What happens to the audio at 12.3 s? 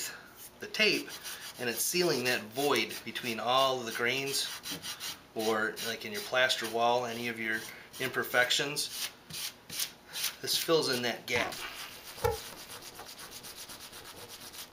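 At 12.3 s the sound is inside a stretch of overlap-add ripple that runs from 11.36 s to the end at 14.72 s. The audio was split into windowed frames and rejoined with overlaps whose gains don't add up evenly, so the level swings by about 60 dB once per frame, around 400 times a second. Heard as a metallic buzz with extra tones around each note, it differs from dropouts because the dips never stop and are evenly spaced.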